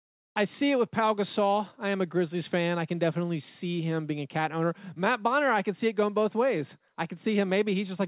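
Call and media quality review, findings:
Nothing to flag here: the speech comes through an ordinary call path, and the top end stopping at 4 kHz is simply what a G.711 mu-law link delivers.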